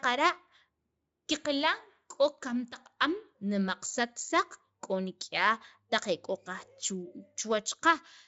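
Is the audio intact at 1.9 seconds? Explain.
Yes, the audio is intact at 1.9 seconds, with no fault heard at that moment.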